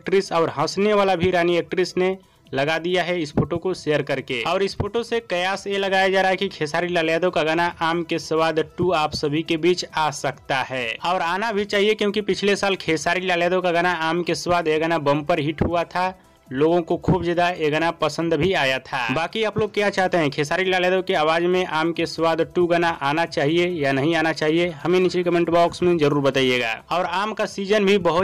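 Nothing here needs flagging, since no dropouts, clicks, glitches or other technical faults turn up anywhere along the way.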